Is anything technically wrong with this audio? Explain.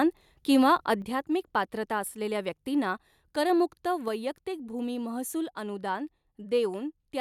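Yes, there's one. At about 1.02 s the whole recording, voice and background together, drops abruptly by about 6 dB and stays there. That's the signature of a microphone volume stepped down, most likely the call software cutting the input gain in a single jump after judging the mic too hot.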